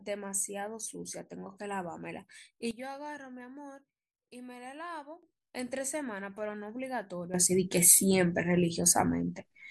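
At 2.71 s the speech drops abruptly by about 12 dB, with the background noise falling by the same amount. It stays low until 5.23 s, then snaps back. At 7.34 s the level leaps up by about 12 dB and holds to the end. Each change happens between one sample and the next, with no fade. This sudden gain jump is likely a digital gain setting applied without a ramp.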